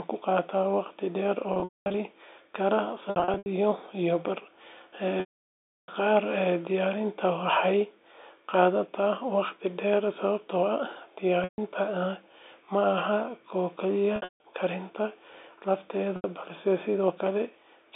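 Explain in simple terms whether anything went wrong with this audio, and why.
The speech drops out six times from packet loss with pitch repetition: at 1.54 to 1.94 s, 3.10 to 3.46 s, 5.20 to 5.88 s, 11.44 to 11.58 s, 14.16 to 14.44 s and 16.16 to 16.24 s. When chunks of audio went missing, the receiver filled each gap by repeating the last bit of voice and fading it out. This causes a brief buzzy hold, then silence in the longer gaps, worst at 5.20 s, before the speech blends back in.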